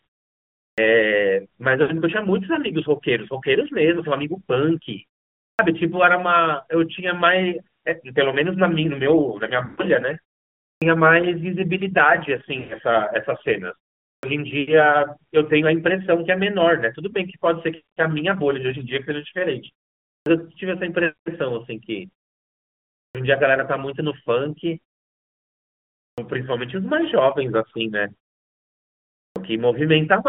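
The speech runs through an AMR narrowband mobile codec for its whole length. The band sits at roughly 150 Hz to 3.5 kHz with nothing above, and the damage is plainly audible: a buzzy, synthetic edge from the sparse pulse excitation driving the vocal tract model, consistent with the 10.2 kbps mode. The muted pauses between phrases drop to silence, and the phrases after them come back with their starts cut off.

The first clipped start after a pause comes at 0.69 s. The output path sleeps through silence and needs time to lock again, so roughly 80 to 90 ms at each onset is swallowed and the sound begins abruptly, missing its first sounds. The same happens at 5.51, 10.73, 14.14, 20.17, 23.06, 26.10 and 29.27 s, after pauses of about 0.4 to 1.3 s.

Lost AMR speech frames fall at 1.82 s (80 ms), 9.66 s (120 ms) and 12.60 s (100 ms), consistent with runs of four, six and five 20 ms frames failing their checksum. 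The decoder repeats the last good pitch and vocal tract settings at falling gain. Each gap therefore sounds like a smeared, drawn-out warble that sags toward silence. The longest gap is at 9.66 s, and each time the speech resumes weak or rough for a moment.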